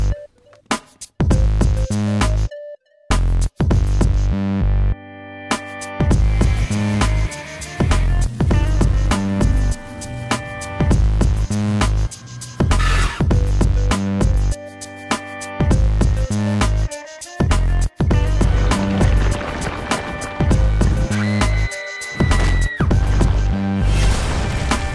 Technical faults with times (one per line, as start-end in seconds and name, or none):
none